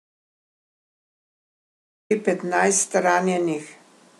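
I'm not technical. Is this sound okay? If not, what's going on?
No. The clip opens in an audio dropout to silence. From the very start until about 2.11 s there is total, dead silence, with not even faint background hiss, before the speech cuts in mid-flow. A natural pause would keep some room sound; this one most likely came from the input being lost while recording continued.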